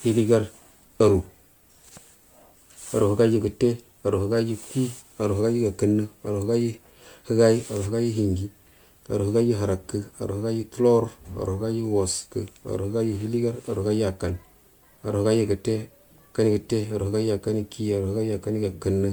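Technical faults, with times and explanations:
Throughout, generation loss: the speech sounds swirly, smeared and hollow, with blurred consonant attacks and a watery texture that a single encode at this quality would not produce. The likely cause is repeated lossy re-encoding, which fits around seven passes through an MP3 chain at 128 kbit/s. Each pass re-quantises on a shifted frame grid, so the noise and spectral holes build up. Content still reaches about 20.1 kHz.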